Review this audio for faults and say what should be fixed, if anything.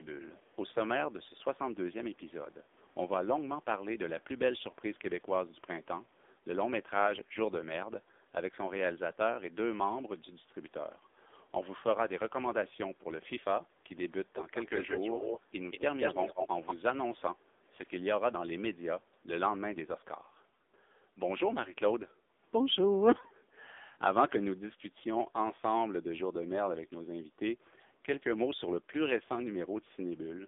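The whole recording carries the sound of the AMR narrowband mobile codec (AMR-NB) at 6.7 kbps, with heavy codec damage. The line band runs from about 250 Hz to 3.6 kHz, and nothing passes above 3.7 kHz, so sibilants and air are gone. At this low rate the vocal-tract model is fed too few pulses per frame, which makes the speech buzzy and synthetic. To prevent it, carry the call over a wideband or higher-rate codec path.

A delayed second copy of the speech appears in five places. From 6.02 to 6.31 s it is very faint and trails by 229 ms. The other four trail by 184 ms: 14.34 to 15.42 s, 15.69 to 15.82 s, 15.99 to 16.48 s and 16.66 to 16.75 s. In those four the copy sits close to, and at times level with, the direct speech. This is echo leak, likely from a far-end loudspeaker whose echo canceller failed to subtract the pickup and sent it back down the line. To prevent it, have the far end use a headset or a properly converged, tuned echo canceller.

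The room background is ducked twice by background gating from the echo canceller. From 13.67 to 13.84 s it drops by about 7 dB for roughly 150 ms. From 23.22 to 23.55 s it drops by about 11 dB for around a third of a second. Each time, the canceller attenuated the microphone hard while the loudspeaker was active, then released it. To prevent it, set softer suppression with comfort-noise fill so the background stays steady.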